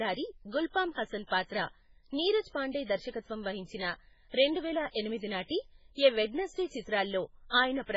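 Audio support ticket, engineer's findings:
Watery, swirly speech throughout; treble absent above about 7.6 kHz; smeared attacks, chirpy s sounds. Likely MP3 compression at a very low bitrate, around 16 kbps: encoder cuts the treble and zeroes weak frequency lines, which flicker frame to frame.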